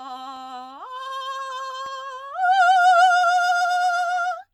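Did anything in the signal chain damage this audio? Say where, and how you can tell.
Yes. The damage is at the driver or buffer stage: two blocks of digital silence cut into the music, at 0.36 s and 1.86 s, heard as sharp ticks. The output drops abruptly to zero for 1.85 ms and 0.67 ms, the second fitting a 32-sample block, when a buffer went unfilled in time.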